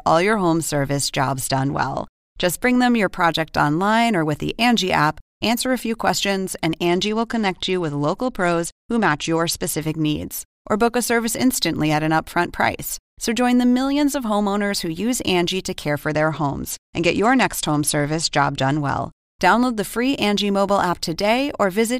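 From 1.46 to 2.64 s, after "your home service jobs", the speech goes dull and gritty, a Bluetooth SBC bit pool drop that fits a fall from 31 to 12 (about 88 kbps). The starved top bands lose treble and coarse quantising adds grain. It recurs at 6.85 to 9.81 s and 16.00 to 19.22 s.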